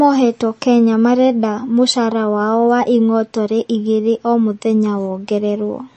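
Throughout the speech, the sound is watery and swirly, with a hard treble ceiling at 8.3 kHz. This is likely MP3 compression at a low bitrate, near 33 kbps. Starved of bits, the encoder cut the highs and let weak detail flicker.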